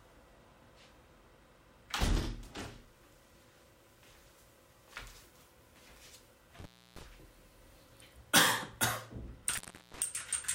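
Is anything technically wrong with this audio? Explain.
Yes. There is an intermittent contact fault, heard twice. The first runs from 6.59 to 7.03 s, with the signal gone for about 311 ms. The second runs from 9.49 to 10.02 s, with a gap of about 365 ms. A loose plug or cable briefly loses its connection, so the signal path opens. The sound drops out abruptly, with crackle as the contact breaks and remakes. Faint hiss fills each gap.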